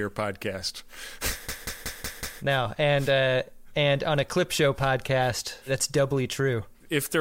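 A speech clip with a machine-gun stutter from 1.49 to 2.42 s, just before "now and uh and": one fragment about 186 ms long plays five times in a row, hammering at about 5.4 repeats per second, after which the talk resumes with little or nothing skipped. This is a system hang loop. The computer or its audio driver stalled while the sound hardware kept replaying the same ring buffer, whose length fits an 8192-sample buffer.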